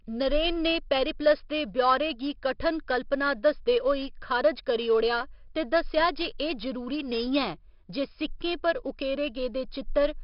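Speech, carrying heavy 4-bit ADPCM compression across its whole length. Each sample is coded as a coarse 4-bit step from a predicted value, so the quantisation error rides along with the speech as a gritty hiss that rises and falls with its level, roughening sharp onsets where the adaptive step lags. Nothing is present above 5.3 kHz, giving a dull, band-limited sound, and the overall rate points to roughly 44 kbps at a low sample rate.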